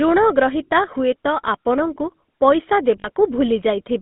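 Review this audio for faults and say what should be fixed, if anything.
The whole recording runs through the GSM full-rate codec. The band sits between 150 Hz and 3.6 kHz, and the vocal-tract model driven by sparse, regular pulses gives the speech a clearly buzzy, gravelly edge, which fits a 13 kbps full-rate stream. To avoid it, record or route the call over a wideband codec such as AMR-WB or Opus instead.

There are lost GSM frames from 3.0 to 3.10 s. The decoder repeats the last good frame, so the sound hangs as a short, rough metallic ring. The 40 ms gap fits two dropped 20 ms frames. A cleaner radio link or a stream with forward error correction would prevent these losses.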